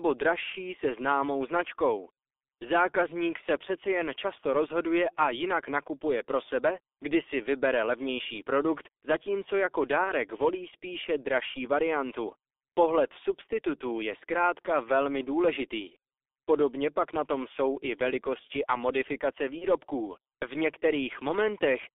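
A speech recording carried over a G.723.1 codec link at about 6.3 kbit/s, with heavy codec damage throughout. The spectrogram shows energy confined to roughly 300 Hz to 3.6 kHz, with nothing above. The voice sounds muffled and hoarse, and consonants smear because the coarse 30 ms frames update the vocal model slowly. VoIP packet loss concealed by the speech codec appears at 10.04–10.12 s, between "levnější produkt zatímco jako" and "volí spíše dražší variantu", and at 19.58–19.65 s, just after "i velikosti a modifikace". Each gap fits the loss of a single 30 ms frame. The decoder repeats its last pitch and filter at falling gain, so each spot has a brief stretched sound that fades. On the waveform this shows as a short, shrinking stretch. The spectrogram shows smeared, weakened energy before normal speech recovers.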